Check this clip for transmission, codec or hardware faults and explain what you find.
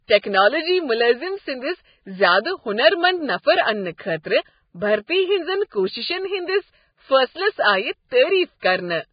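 Two faults are present in this speech.

Throughout, the speech sounds hissy and grainy, with nothing above 4.9 kHz. This is likely heavy Vorbis compression at a very low bitrate, about 15 kbps, coarsely quantising the treble.

Pre-echo is heard as brief hiss just before sharp attacks at 3.97–3.99 s, 4.23 s and 8.60–8.63 s. Block-wide quantisation noise spills ahead of each onset, smearing it.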